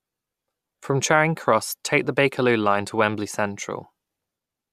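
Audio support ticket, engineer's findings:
Listened through the speech clip and found nothing to flag, so no faulty component to chase here.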